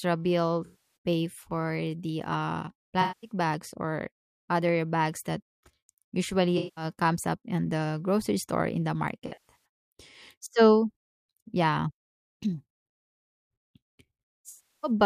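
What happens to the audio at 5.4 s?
Nothing goes wrong at 5.4 s; the speech carries on intact through that moment with no dropout, click or distortion.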